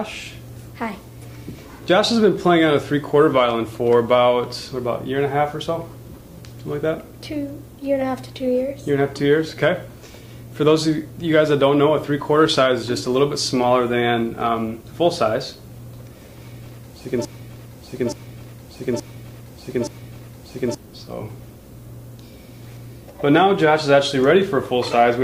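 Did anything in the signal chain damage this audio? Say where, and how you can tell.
Yes. At 5.75 to 5.79 s there is a brief, faint chirp of noise, quiet at roughly -40 dBFS, lasting about a couple of codec frames. This is a corrupt frame decoded at the codec stage: damaged bits were played anyway, putting energy at the wrong frequencies.

From 17.25 to 20.75 s, a 0.87 s fragment repeats exactly, back to back, four times, and the audio that belonged there never plays. This broken-record loop is likely a playback or stream stall that kept resending the last buffered fragment.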